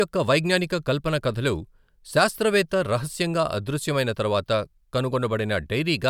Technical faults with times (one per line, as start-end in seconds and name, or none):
none